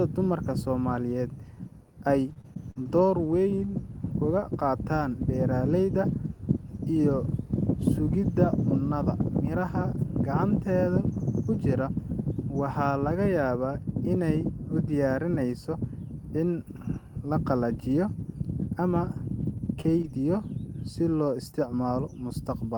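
Repeated packet loss (robotic sound) runs from 2.29 to 3.33 s. Five separate gaps, the longest 42 ms, were each patched by extending the last sound, about a tenth of a second in total. The speech turns choppy, with small pieces missing.

Lost packets rebuilt from error correction begin at 19.05, 19.41, 19.57 and 19.63 s, each 20 ms long. Every lost packet was replaced by the low-bitrate copy carried in the following packet, so nothing drops out, but each frame sounds briefly rougher and noisier.

Short concealed packet loss follows from 19.81 to 19.86 s. Here 20 ms never arrived in time and was filled by continuing the preceding sound, heard as a quick smear. A rebuilt 20 ms frame starting at 19.84 s overlaps the end of this patch.

Two more error-correction rebuilds follow at 19.88 and 20.03 s, adding the same brief roughness. A second short concealed packet loss, from 20.02 to 20.05 s, fills another missing 20 ms with continued sound and leaves a small wobble. 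The rebuilt frame at 20.03 s overlaps its tail.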